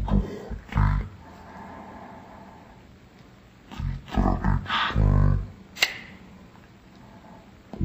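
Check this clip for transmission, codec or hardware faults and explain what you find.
One fault runs through the whole clip: stereo read as mono. The interleaved left and right samples are taken in sequence as one channel, so everything plays at half speed and 12 semitones low, a full octave down, with a faint mirrored image in the upper spectrum.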